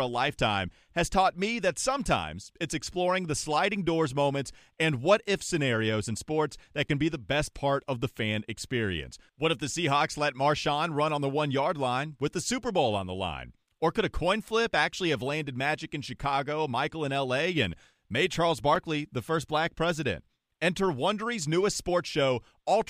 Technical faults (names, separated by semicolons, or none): block of digital silence